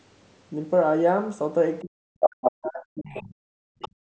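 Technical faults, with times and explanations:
1.82–3.4 s, speech suppressed in double talk: the voice sinks and breaks up in pieces, dropping by roughly 40 dB at its deepest across about a second and a half. This is likely the echo canceller failing to separate this talker from loudspeaker echo, so it turned both down.
2.22–2.51 s, 3.14–3.23 s and 3.8–3.89 s, other side's voice leaking through: a second voice slips in. In the first stretch it sits a few dB above the talker, and in the two later scraps it is far quieter. This is likely loudspeaker playback that the echo canceller didn't fully remove from the mic.
3.68 s to the end, background gated by the echo canceller: the room sound drops away by about 39 dB for around a fifth of a second in total. The canceller clamped the mic hard while the loudspeaker was active, so the ambience simply vanishes.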